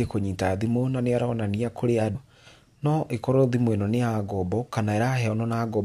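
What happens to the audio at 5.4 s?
At 5.4 s the speech runs on without any audible fault, with no dropout, click, distortion or level change at that point.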